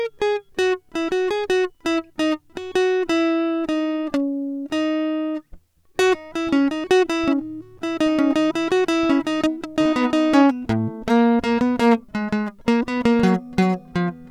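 No technical faults in this music.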